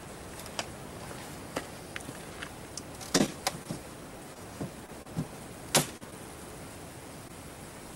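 Between 3.17 and 6.14 s the audio shows scattered short gaps: about seven brief holes where packets arrived late or not at all, the longest around 30 ms. The receiver patched each one by extending the preceding sound, which leaves small ticks, smears and hiccups across roughly 7 percent of that stretch. On a waveform these appear as short, unnaturally smooth repeated cycles. On a spectrogram they appear as thin vertical seams where the texture briefly freezes or blurs. A second event, a short concealed packet loss at 7.28 to 7.31 s, drops about 20 ms of sound, and roughly 11 ms of it is filled by continuing the last pitch or shaped noise before blending back. It is heard as a quick wobble or tick and can swallow a brief transient. On a spectrogram it shows as a narrow smeared band and a slight discontinuity where the real signal resumes.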